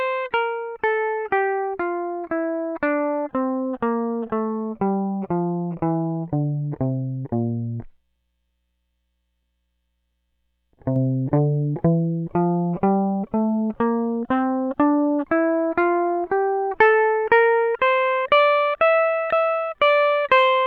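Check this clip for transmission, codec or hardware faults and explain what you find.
One fault is present in the music: a sudden gain jump. At 10.96 s the level steps up by about 4 dB and stays there to the end. The change happens from one sample to the next, with no fade. The music and its background noise rise together, so the whole mix sounds abruptly louder. The likely cause is a digital gain setting or bit shift applied instantly instead of ramped in over a short time.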